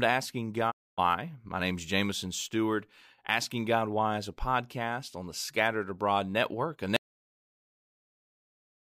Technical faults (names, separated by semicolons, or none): digital broadcast dropout; audio dropout to silence